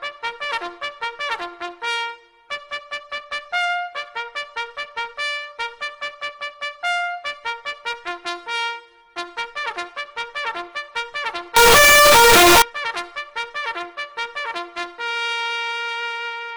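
From 11.56 to 12.62 s the sound turns into a loud, harsh, near-square buzz: float read as integer, likely 32-bit float samples decoded as 32-bit integers.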